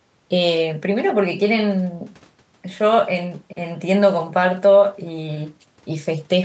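No technical faults are audible.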